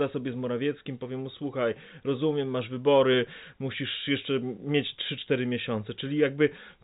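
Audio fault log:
Nothing to log here, just speech coming over ordinary G.711 telephone coding, which is why everything tops out around 3.8 kHz, and no faults turn up anywhere.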